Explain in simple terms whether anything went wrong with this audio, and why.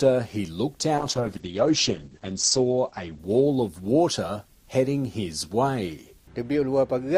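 Something did go wrong. From about 1.01 s to 4.93 s there's a call bitrate drop. The connection seemed to get squeezed, so the audio was sent with far less detail than before. You can hear the sound turn rough and watery, and the crisp top end disappears, with everything above about 8 kHz cut away so it sounds muffled. It sits at its worst for about 1.6 s before recovering to the fuller sound at the end.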